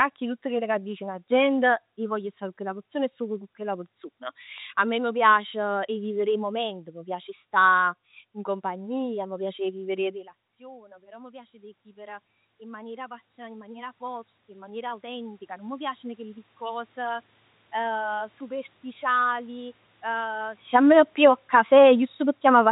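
Between 14.54 and 15.27 s, scattered short gaps: about five lost packets, the longest roughly 15 ms, patched by extending the preceding sound. They cause brief ticks and smears, visible as tiny repeated or blurred slices in the spectrogram.

From 19.04 s to the end, automatic gain falling: the gain control judged the input too loud or its background noise too strong and lowered it gradually. Speech and background sink together, and the waveform envelope tapers.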